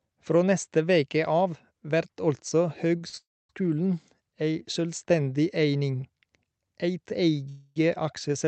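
Speech, carried over a call path whose audio is band-limited at 8 kHz, consistent with an Opus codec at roughly 48 kbps. Two short stalls from a late packet occur at 2.97 to 3.02 s and 3.08 to 3.15 s. In each, the last sound is held, for 30 ms and then 45 ms, with a slight buzz or dip while the jitter buffer waits, and the speech resumes from the same point with nothing lost. Two longer call audio freezes follow. From 3.17 to 3.51 s, a gap of about 0.32 s opens, most of it (0.27 s) silent after a brief fading buzz or hiss. From 7.49 to 7.78 s, a 0.27 s hold is filled almost entirely by a decaying buzz or hiss. Both freezes were likely caused by packets held up in transit, draining the jitter buffer before playback continued where it had stopped.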